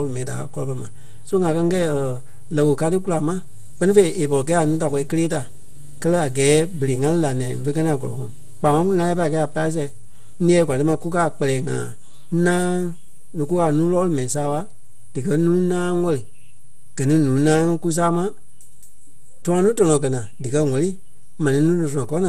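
From start to finish the waveform sits displaced from zero by a constant amount, a DC offset. It cannot be heard as such, but it eats into headroom on one side and appears as steady energy pinned at the very bottom of the spectrum.

Across the whole speech track the sound is swirly, smeared and hollow, with softened consonant attacks and nothing above 15.2 kHz. The likely cause is generation loss: roughly ten lossy re-encodes, consistent with MP2 at 96 kbit/s, each adding fresh quantisation noise.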